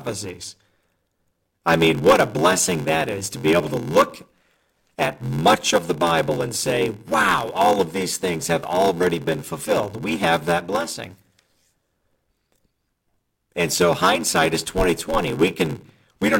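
A block size mismatch (padded) runs from start to finish: one stage delivers shorter blocks than the next stage reads, which fits a 512-sample read buffer, and the shortfall in each block is filled with silence. That inserts a tiny gap into every block, heard as a steady buzz at 86.1 Hz laid over the speech, and because padding stretches the timeline, the speech plays at 0.861 times normal speed while keeping roughly its normal pitch.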